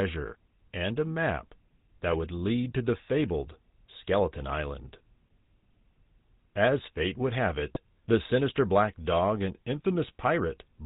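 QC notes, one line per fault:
Throughout, GSM full-rate codec: The signal has passed through the original GSM speech coder, consistent with the 13 kbps full-rate mode. That coder rebuilds speech from a vocal-tract filter excited by a sparse, regularly spaced pulse train, discarding two of every three excitation samples, and it carries nothing above 4 kHz. The result is plainly audible here: a dull, band-limited voice with a buzzy, gravelly texture, the roughness most noticeable on higher-pitched stretches.
7.74 to 7.79 s, GSM bit errors: For about 44 ms, corrupted bits reached the speech decoder, which fits a bit error rate near 0.9 percent striking roughly three consecutive 20 ms frames. Damaged filter, pitch or gain parameters make the decoder synthesise the wrong spectrum and level for those frames, so the voice briefly breaks into a squawking, gargled burst before clean decoding resumes.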